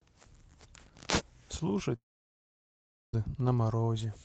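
At 1.95 s the speech breaks off in what is likely a long network dropout. The last sound is stretched into a short, fading buzz, then about 1.1 s of near silence follows until the audio resumes at 3.15 s, with the missing stretch simply gone. On a spectrogram the speech harmonics smear into a blurred band that dies away into an empty gap. The waveform collapses to a flat line before abruptly picking up again. Throughout the clip the speech carries call-codec coding noise and little energy above 8 kHz.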